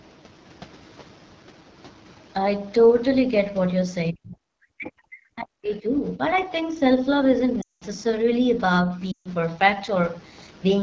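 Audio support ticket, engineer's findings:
AMR wideband (HD Voice) codec, whole clip. Rough, raspy texture on all speech. Top band above 6.4 kHz sounds like hiss, not detail. Damage plainly audible. Fits a low AMR-WB rate, around 8.85 kbit/s, where the pulse-driven vocal tract model runs short of bits.

Speech suppressed in double talk, 4.11 to 4.39 s and 4.76 to 6.21 s. Level dips sharply, down about 40 dB at worst. Likely the echo canceller unable to separate near-end talk from loudspeaker echo and turning both down.

Lost AMR speech frames, 7.62 to 7.84 s and 9.12 to 9.29 s. Sound drops to near silence within two frames, gaps of 200 ms and 140 ms. Fits runs of roughly ten and seven 20 ms frames. Decoder repeats the last good parameters with falling gain. Brief rough onset on recovery.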